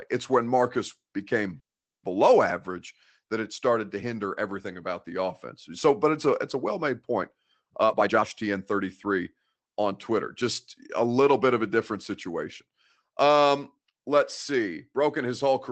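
At 1.59 to 2.05 s the speech stops for about 0.44 s, nearly all of it silent, then resumes intact: a call audio freeze, likely from packets stalling in transit. From 7.82 to 10.43 s, between "a well made point" and "a little bit of", a jitter buffer speed-up plays the speech at 117% and unchanged pitch, trimming roughly half a second so the speech sounds hurried.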